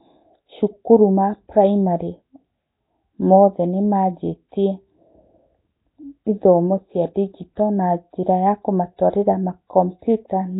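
Throughout the speech there is a rough, hissy halo and a smeared, underwater texture, most likely from Nellymoser compression, which fits a low bitrate near 16 kbps. A spectrogram shows nothing above 3.9 kHz, with speckled noise filling the weaker bands in blocky frames.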